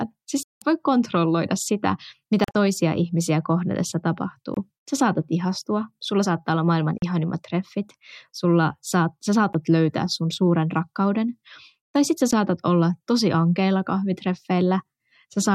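The speech breaks into silence six times, most likely a Bluetooth dropout: audio packets missed their deadline and were discarded, so the stream resumes further on. The gaps come at 0.43–0.62 s (about 187 ms), 2.44–2.55 s (broken holes, longest 40 ms), 4.54–4.57 s, 6.98–7.02 s, 9.53 s and 12.31 s. They fit units of about 13 ms. The waveform shows flat segments, and the spectrogram shows full-band vertical blank strips.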